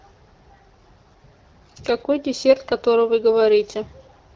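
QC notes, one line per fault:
Nothing to flag here; the speech comes through the AMR wideband (HD Voice) coding with only light coding wear, which fits a rate around 12.65 kbit/s.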